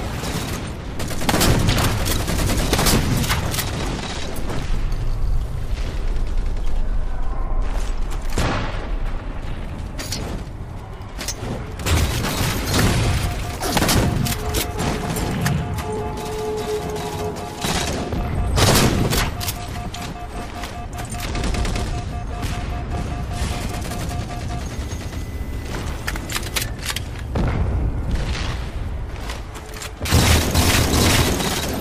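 At about 15.97 to 16.01 s there's a short burst of chunks out of order. One 10 ms chunk of audio arrived or got written three chunks late, so it plays after the three 10 ms chunks that should have followed it. Nothing's missing, but that 40 ms stretch comes out in the wrong sequence, with three hard joins where the pieces butt together. It registers as a brief garbled, jumbled moment in the sound.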